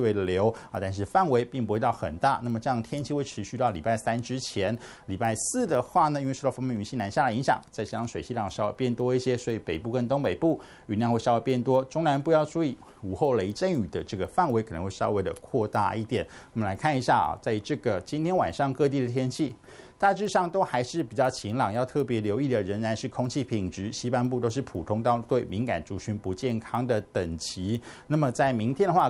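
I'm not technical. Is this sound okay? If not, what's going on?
No. There's a steady ticking, about four times a second, all the way through. It's a resampler restarted on every block: each quarter-second chunk gets converted separately, leaving a tiny glitch at every seam.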